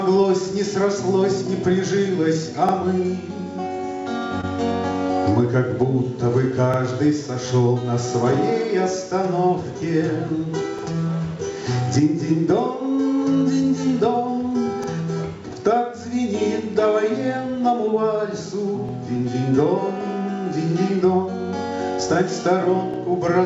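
The audio arrives through a call path whose content stops at 8 kHz, consistent with a G.722 codec at about 64 kbps. It carries two faults. Overlapping chunks cause a short stutter at 2.69, 6.74, 10.79, 14.84, 18.89 and 22.94 s. At each join the new chunk begins before the previous one finished, so a 50 ms sliver plays twice. What marks it as chunk overlap is the strict 4 s spacing and the fact that the sound genuinely repeats rather than being invented. Short concealed packet loss appears at 4.41 and 19.17 s. Each time, about 20 ms never reached the decoder, and the receiver filled the gap by extending the preceding sound before blending back. That gives a brief smear or wobble instead of a duplicated fragment, and these two events fall off the 4 s grid.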